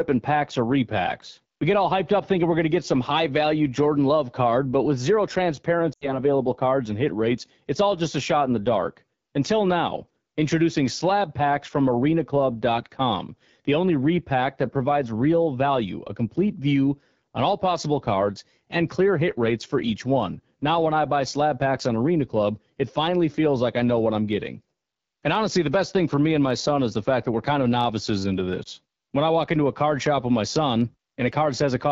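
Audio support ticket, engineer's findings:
AMR wideband (HD Voice) codec, whole clip. Speech rough and raspy throughout, plainly audible damage. Sound fits the 8.85 kbit/s mode, one of the two lowest rates. Vocal tract model starved of bits. Top band only shaped noise.

Lost AMR speech frames, 5.93 to 6.19 s, just before "cards and hit rates". About 80 ms missing, which fits four frames failing checksum. Decoder repeats last pitch and tract settings, gain falling. Sound drops to near silence within two frames, returns weak.

Lost AMR speech frames, 28.63 to 28.68 s, just after "kind of novices into". Single frame concealed. Brief dip or warble. Radio errors on the link.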